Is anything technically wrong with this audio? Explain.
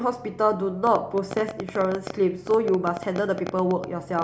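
Yes. A train of clicks runs from 0.87 s to the end of the clip at 4.23 s. Sharp pulses of much the same shape arrive about 10.7 times per second at an uneven pace, around forty in all, with peaks roughly 10 dB above the speech. The likely source is interference from nearby equipment or a faulty connection or power supply injecting impulses into the signal. The result is an irregular ticking laid over the speech and clearly audible in its pauses.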